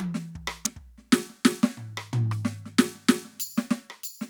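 At 0.65 s a sharp snap lands on top of the music, an electrical switching spike lasting only a few milliseconds and peaking around -5 dBFS. It was likely picked up from a nearby switch, motor or static discharge arcing into the audio line. What separates it from a digital glitch or dropout is that the music carries on underneath without a gap or skip. The snap is simply added over it as an isolated, tight burst.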